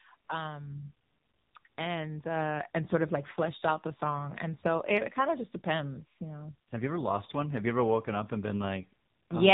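AMR narrowband mobile codec damage runs through the whole speech clip. The sound stops sharply at 4 kHz, pointing to 8 kHz sampling. The codec rebuilds each 20 ms frame from a vocal-tract model excited by a few pulses, so fine detail is replaced by an approximation. Here the damage is plainly audible: voiced sounds take on a buzzy, synthetic edge, and the coarseness fits a low AMR-NB mode of about 7.95 kbps.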